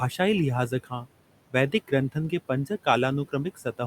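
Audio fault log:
Throughout: noise suppressor artifacts. The suppressor pulls steady background down by about 18 dB between phrases, so the room noise dips and swells against the speech.
0.69–1.07 s: speech cut by the noise suppressor. It mistook part of the speech for noise and dropped it by up to about 12 dB, so roughly 150 ms of quiet detail sounds swallowed. The room noise, sitting about 19 dB under the speech, is what it was chasing.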